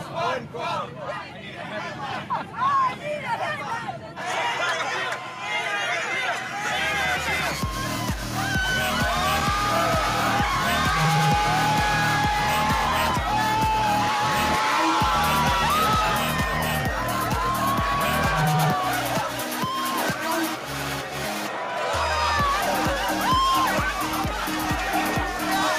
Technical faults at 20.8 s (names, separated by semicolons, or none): none